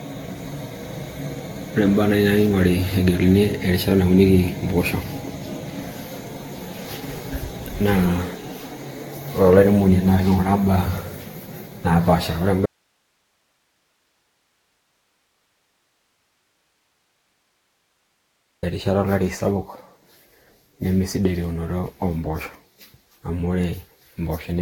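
Right from the start the speech has that swirly, hollow, smeared quality with softened consonant attacks, and nothing above 18.7 kHz. That's generation loss, likely from half a dozen or so rounds of Vorbis re-encoding at around 66 to 68 kbit/s, each pass stacking fresh quantisation damage.

Then at 12.66 s, right after "naapasha ore", the speech drops out abruptly for about 6 s until 18.63 s, leaving only hiss roughly 50 dB below the signal. It's an audio dropout to a faint residue, likely the source feed lost while the downstream path stayed live.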